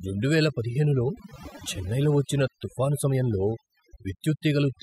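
Overdone noise removal runs throughout this speech: an over-aggressive noise reducer shuts off bands near its noise estimate, leaving twinkling specks in near-silent gaps.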